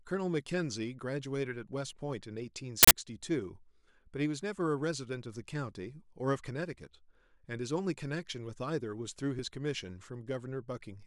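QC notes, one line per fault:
1.93 s, 4.41 s, 9.39 s: audio missing between chunks. At each point a slice of about 10 ms drops out and the two sides join with no gap, giving a small skip. This likely comes from 2.5-second processing chunks losing a piece at each handover.
2.83–2.91 s: uninitialised buffer. An 80 ms block plays as a sudden burst of digital noise. The buffer went to the output before any audio was written into it, so leftover memory contents were played as samples.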